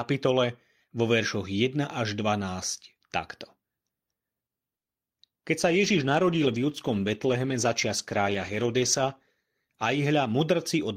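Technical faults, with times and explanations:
4.77 to 4.88 s, short stall from a late packet: a packet arrived late and the jitter buffer ran dry, so the receiver held the last sound for about 90 ms, then resumed where it left off. Nothing is lost, but the speech is stretched with a slight buzz or dip, adding 90 ms of delay.
5.61 s to the end, call bitrate drop: the bandwidth estimate fell and the encoder went from 64 kbps to 15 kbps, staying at the lowest rate for about 3.6 s. Coarser coding with the high frequencies cut away makes the speech rough, watery or muffled.
10.06 to 10.89 s, jitter buffer speed-up: with more audio queued than its target, the receiver trimmed short pitch-period pieces repeatedly, dropping roughly 50 ms in total. Playback runs at 105% speed with unchanged pitch, so the speech sounds slightly hurried.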